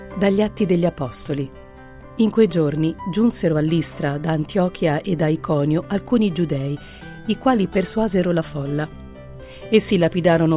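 No technical faults are audible anywhere in this audio.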